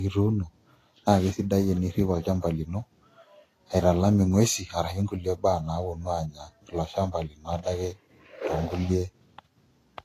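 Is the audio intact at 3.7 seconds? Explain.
No. At 3.7 seconds, as across the whole speech clip, this is likely low-bitrate audio saved at a high bitrate: an earlier low-bitrate encode, consistent with a Vorbis-style stage near 32 kbit/s, was re-saved as MP3 at a much higher rate that cannot restore what was discarded. Nothing remains above 14.2 kHz, so the top end sounds dull and cut off, and the first encoding's artefacts persist unchanged.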